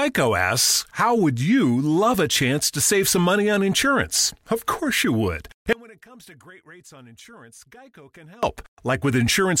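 At 5.73 s, just after "course you would", the speech drops out abruptly to a faint residue until 8.43 s, a gap of 2.7 s. Only faint sound, roughly 25 dB below normal level, remains, likely from the wanted signal being lost while the downstream path stayed live.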